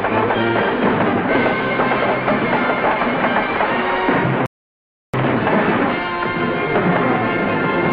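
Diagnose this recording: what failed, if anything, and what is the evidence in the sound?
Playback stage: a rebuffering stall at 4.46 s drops to silence for about 0.68 s, then resumes exactly where it left off once more data arrived.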